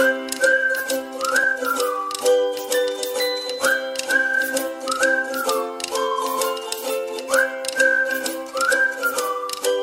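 At 0.78 s, running to 0.80 s, there is a short dropout of lost LE Audio frames lasting 22.5 ms, which fits three consecutive 7.5 ms LC3 frames. The decoder fills the gap by repeating the last good spectrum with randomised signs, so any tonal content turns briefly into a noisy smear before normal decoding resumes. The rest of the stream carries light lossy compression.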